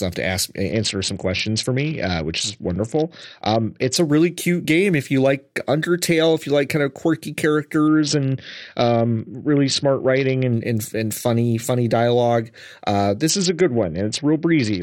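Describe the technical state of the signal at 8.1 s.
At 8.1 s you're inside a Bluetooth SBC bit pool drop running from about 7.88 to 10.53 s, just after "like kind of quirky". The bit budget collapses, which fits a bit pool falling from 31 to 7, around 61 kbps, so the top sub-bands starve and the rest get coarsely quantised. The speech goes dull and gritty until "and and funny funny".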